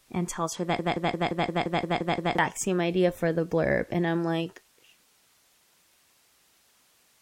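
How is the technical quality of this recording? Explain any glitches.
The recording has one clear glitch: a broken-record loop near the start. The fade-out ending at 5.04 s is smooth and deliberate. From 0.79 to 2.39 s, a 174 ms fragment repeats exactly, nine times back to back, and the sound that should have played there is lost. A stalled player or stream likely kept resending its last buffer. Unlike a stutter or echo, the repeats are identical, with no decay.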